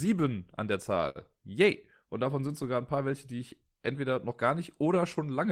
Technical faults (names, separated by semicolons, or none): short stall from a late packet